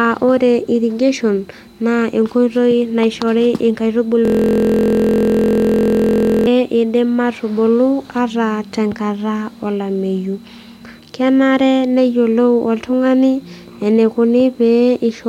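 From 4.25 to 6.47 s the speech locks into a system hang loop: the driver stalled while the hardware replayed one 23.2 ms slice, which fits a 1024-sample buffer, about 95 times. Unlike a dropout, the identical repeats fuse into a steady 43.1 Hz buzz.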